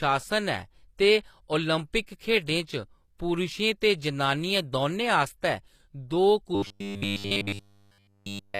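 Low-bitrate audio saved at a high bitrate runs throughout: the speech keeps the artefacts of a heavy earlier encoding, likely a low-bitrate codec such as HE-AAC, which the later high-rate MP3 cannot undo.

Robotic sound from repeated short buffers takes over from 6.55 to 8.59 s. The speech turns into a rigid metallic buzz at 100 Hz, which fits a 10 ms chunk replayed continuously while fresh audio is skipped, likely because new audio arrived too seldom.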